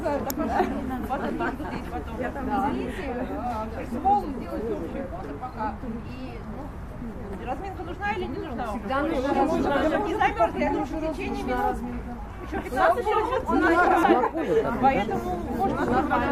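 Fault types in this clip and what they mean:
Damaged data in a compressed stream: corrupted bytes make the decoder misread frames and lose sync, producing very brief blips at 0.30 s and 14.03 s. On a spectrogram each appears as a thin vertical broadband streak, and the waveform shows a short, abrupt discontinuity.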